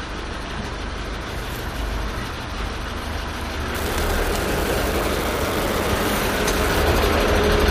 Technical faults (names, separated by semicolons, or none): unreliable data bit